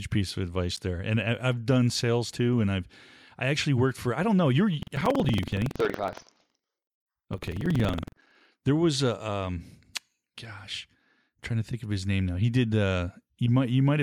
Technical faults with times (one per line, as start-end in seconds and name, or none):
4.78-8.49 buffer tearing